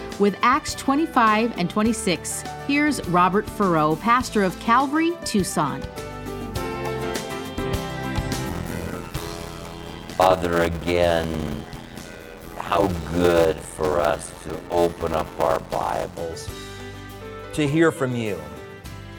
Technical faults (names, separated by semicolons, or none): block size mismatch (padded)